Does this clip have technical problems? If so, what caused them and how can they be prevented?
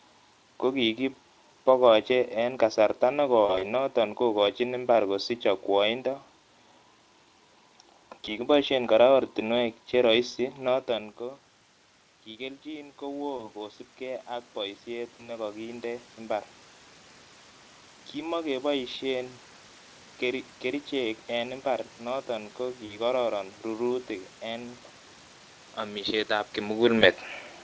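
Yes. VoIP packet loss concealed by the speech codec occurs at 3.45–3.64 s, 8.25–8.29 s, 13.37–13.51 s, 15.17–15.30 s, 22.85–22.92 s (just after "imbar noto ko") and 26.99–27.03 s. At each point the Speex decoder fills missing 20 ms frames by extrapolating its last pitch and filter at falling gain. The result is a brief buzzy or smeared patch that lingers slightly after packets resume. The largest loss, around 3.5 s, totals about 80 ms spread over 160 ms. This can be prevented with a more stable network path, a larger jitter buffer, or forward error correction.

Automatic gain rising runs from 10.67 to 19.03 s, right after "ortinwek che roisi". The input dropped by about 17 dB when the talker moved away around 10.5 s. The gain control responded by gradually adding about 10 dB, so voice and room noise swell together over several seconds. Keeping a steady distance from the microphone, or using a slower, capped gain control, prevents this.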